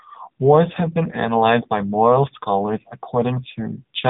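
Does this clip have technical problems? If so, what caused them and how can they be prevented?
Yes. Throughout the speech, the AMR narrowband mobile codec rebuilds the voice from a sparse pulse-driven vocal-tract model at a bitrate consistent with its 6.7 kbps mode. The result is nothing above 3.8 kHz and a heavily buzzy, synthetic tone. Prevent it by using a wideband path or higher bitrate.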